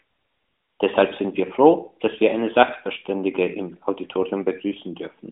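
No technical faults can be heard in this speech.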